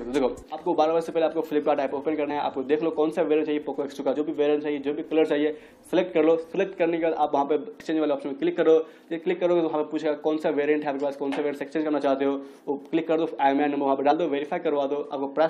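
At 2.29 to 2.31 s, 4.15 s, 7.79 s and 14.11 to 14.13 s, compressed frames are skipped. Whole blocks of the coded audio never play. The sound jumps forward instead. The frame length is 23.2 ms. The first, second and fourth gaps lose about two frames, around 50 ms. The one at 7.79 s loses about three, around 70 ms.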